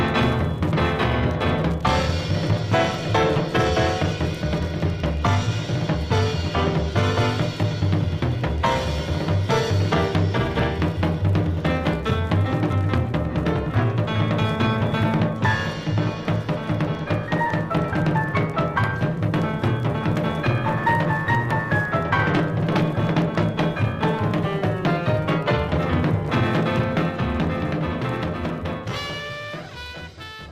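Nothing here calls for comment, since the audio runs along without any technical fault turning up at any point.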